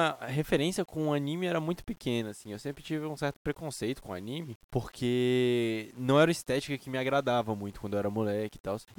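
Throughout the speech, quiet passages turn gritty and the softest tails sputter or drop to silence, with grainy distortion about 30 dB below the signal that follows its level. This is low bit depth without dither, likely from rounding, which fits 8-bit samples.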